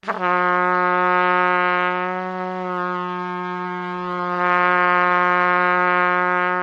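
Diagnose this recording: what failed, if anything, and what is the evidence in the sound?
A call bitrate drop hits the codec stage from 3.64 s to the end. Coarser coding makes the sound rougher. Its top end falls from 20 kHz to 12 kHz, worst for about 1.66 s. This fits an encoder forced from 64 to 28 kbps.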